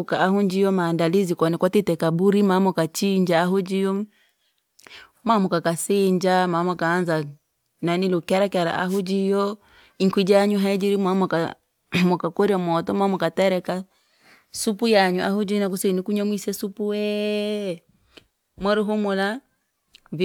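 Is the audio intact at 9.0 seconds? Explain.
No, a wireless microphone noise hit runs from 8.88 to 9.01 s, between "nani lukerakera" and "jiyo inkwi janyu haijiri". The FM radio link fades as reflected signals cancel, so receiver noise surges over the speech as a brief swish of static.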